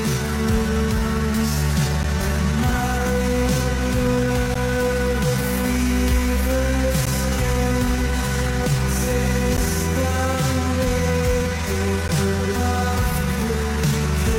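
At 2.03, 4.54, 7.05, 9.57 and 12.08 s the sound drops out for 12 ms each time, a gap between chunks. The audio arrives in 2.5 s blocks, and silence is inserted at every join without anything being lost. The result is a brief, hard-edged hole every two and a half seconds. On a waveform these are flat lines with abrupt edges, and on a spectrogram they are thin vertical blank stripes at a steady spacing.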